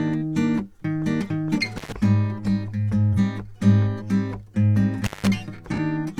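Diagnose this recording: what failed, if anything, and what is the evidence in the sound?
Analogue wiring failed: an intermittent contact. The music cuts out at 1.77 s for about 100 ms and at 5.04 s for about 170 ms. Crackle marks each edge. A loose plug or cable briefly opened the signal path, leaving faint hiss.

The codec also failed, with AAC frame loss and concealment. Short smeared, noisy patches sit at 3.13 s and 5.74 s, each about 43 ms long. That fits one lost frame. The decoder covered each gap by rebuilding from the last good spectrum.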